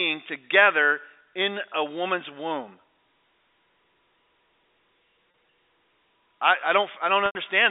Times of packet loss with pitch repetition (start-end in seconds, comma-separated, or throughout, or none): 5.31-5.34, 7.26-7.35